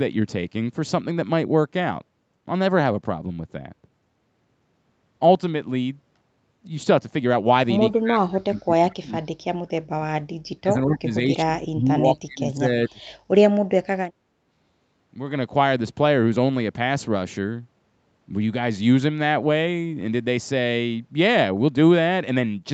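A speech recording in which the voice is cut down in pieces at 7.93–9.2 s, 9.96–10.08 s, 10.26–12.68 s and 12.88–13.01 s, by up to about 40 dB, likely speech suppressed in double talk, showing as collapsed waveform envelope and blanked spectrogram columns. At 8.9–8.95 s a very faint copy arrives 205 ms late, likely an echo leak, appearing as a weak, smeared repeat of earlier harmonics.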